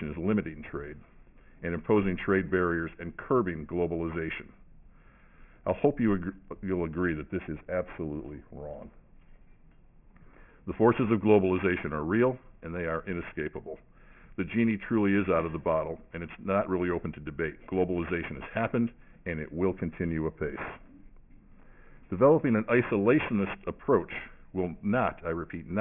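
Aliasing throughout: the audio was resampled down without an anti-alias filter, which fits a 6 kHz rate, so content above 3 kHz folds back, leaving gritty, metallic false tones roughly 20 dB below the signal.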